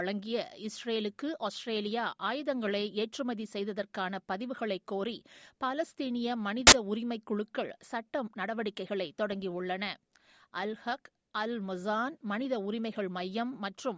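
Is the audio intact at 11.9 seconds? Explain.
Yes, the speech at 11.9 seconds is intact, with no dropout, click, distortion or other audible fault at that moment.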